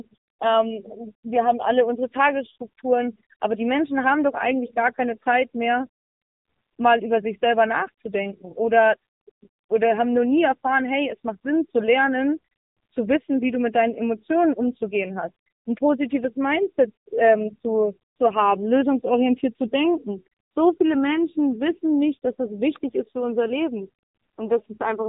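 From start to finish the speech carries the sound of the AMR narrowband mobile codec. Nothing above 3.8 kHz survives, and the voice has a buzzy, synthetic edge. A vocal tract model driven by a handful of pulses per frame replaces the waveform rather than keeping it, and the plainly audible damage points to a low rate near 7.95 kbps. Unlike a simple low-pass filter, this also smears and roughens the voice itself, not just the treble.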